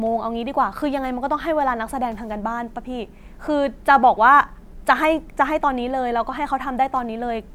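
Nothing stood out as a technical fault anywhere in this speech recording on listening.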